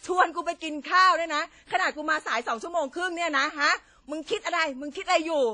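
Throughout the speech there is a ringing, washy quality, with hiss that swells and fades alongside the signal and nothing above 10 kHz. This is likely WMA compression, consistent with roughly 32 kbps, where long transform blocks smear quantisation noise and weak spectral lines are discarded.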